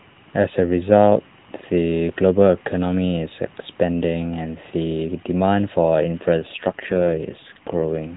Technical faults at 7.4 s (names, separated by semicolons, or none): AMR rate drop